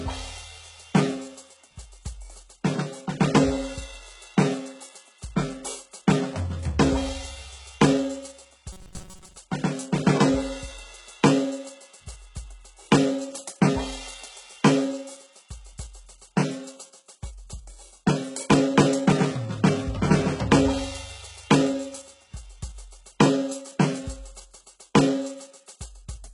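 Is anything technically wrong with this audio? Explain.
Yes, there are two problems.

Throughout the music there's heavy damage that sounds like HE-AAC compression, likely at a very low bitrate, something around 12 kbps. Only the lower spectrum seems genuinely coded, and the top end is patched in by copying lower bands upward under a rough envelope. The treble still extends fairly high, but its harmonics don't line up with the real ones, so the highs come across gritty and metallic.

From 8.73 to 9.37 s the music briefly turns robotic, likely from repeated short buffers. New audio wasn't arriving fast enough, so the player kept looping a tiny slice of what it already had, and most of that stretch is repeats rather than real material. The loop imposes a steady buzz at about 188 Hz, which fits a slice of roughly 5 ms. That gives a rigid, metallic drone that only loosely follows the music underneath.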